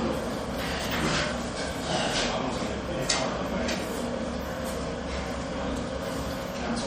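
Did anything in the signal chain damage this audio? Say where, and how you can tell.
Yes. Throughout the clip the sound has a watery, swirling texture with dull, clipped-off treble and smeared attacks, plainly audible. This is likely MP3 compression at the codec stage, at a low bitrate around 48 kbps, which cuts the top end and makes weak frequency lines flicker between frames.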